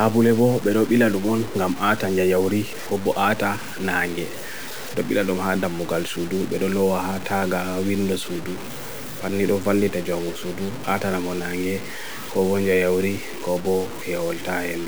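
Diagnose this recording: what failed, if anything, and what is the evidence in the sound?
Grainy distortion tracks the speech throughout, quiet tails sputtering to silence; the waveform shows coarse stair-steps, likely low bit depth without dither from 5-bit truncation during sample-format conversion.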